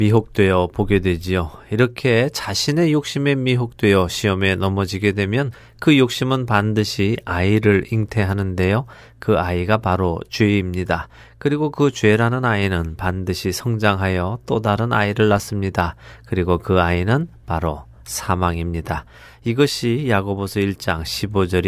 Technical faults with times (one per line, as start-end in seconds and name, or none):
none